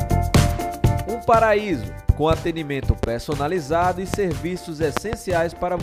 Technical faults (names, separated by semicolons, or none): loud pop